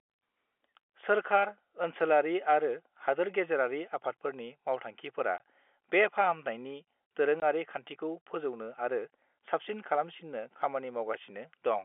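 At 5.38 to 5.40 s and again at 7.40 to 7.42 s, the speech drops out completely for 20 ms, a length that fits one lost 20 ms packet each time. This is packet loss filled with silence: the receiver had nothing to play and inserted silence. Each gap cuts in and out abruptly. A waveform shows a flat line with sheer edges, and a spectrogram shows a thin, fully blank vertical stripe across the narrow 300 Hz to 3.4 kHz telephone band of the G.711 coding.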